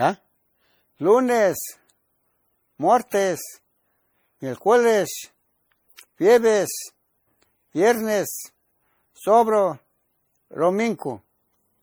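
From start to finish the speech carries a swirly, smeared texture with a hollow, phasey quality, and consonant attacks are blurred rather than crisp. The likely cause is generation loss: the audio has been decoded and re-encoded several times, around five passes, with a lossy codec whose character fits MP3 at about 64 kbit/s. Each pass requantised the signal on a shifted frame grid, so noise and spectral gaps accumulated, even though content extends up to about 20.9 kHz.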